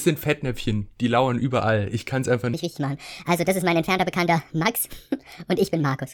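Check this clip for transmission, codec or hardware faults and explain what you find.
One fault is present: a section at the wrong speed. From 2.54 s, right after "kann es einfach", to the end, the speech runs about 1.48 times too fast, likely from playback against the wrong clock. Pitch rises by roughly seven semitones, giving a hurried, chipmunk-like sound. On a spectrogram, harmonics and formants jump upward and spread apart, and the waveform's syllables appear squeezed closer together.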